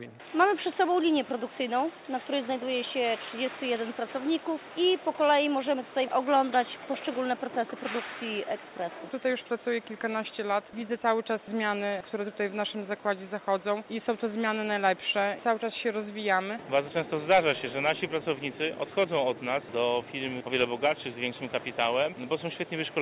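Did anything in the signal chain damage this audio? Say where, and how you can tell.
No, the signal chain introduced no faults here.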